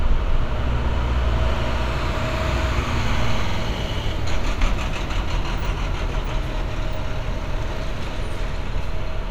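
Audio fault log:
3.48 to 3.58 s, repeated frames: a 48 ms block of compressed audio plays two extra times, a short stutter as the decoder receives the same frames again. This fits a run of frames being duplicated, and it adds 96 ms to the clip.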